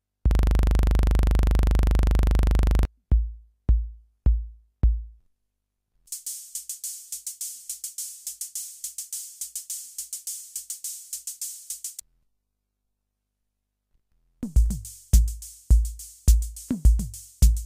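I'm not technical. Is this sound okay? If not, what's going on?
No. From 0.31 to 2.85 s, a 40 ms scrap of sound repeats 63 times, 25 times per second: a system hang loop, where the computer froze while the hardware replayed one buffer.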